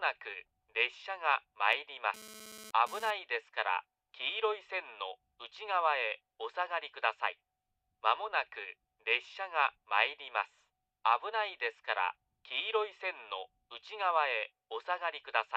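A hard, raspy buzz at about 17 dB below the audio runs from 1.73 to 3.11 s: GSM phone buzz, a nearby phone's 216.7 Hz transmission bursts rectified during a data transfer.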